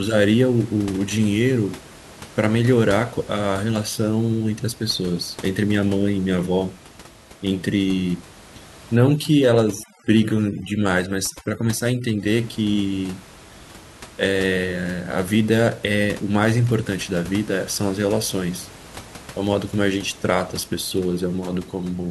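A speech recording with room noise sitting about 21 dB below the voice shows overdone noise removal from 8.96 to 12.28 s. Over that stretch, a noise reducer pushed far too hard switches individual frequency bands down or off wherever they come close to its noise estimate. The background drops and breaks up into twinkling, warbling specks, and the voice loses its quieter components too. On a spectrogram this shows as scattered isolated dots in the gaps and a patchy, hollowed voice.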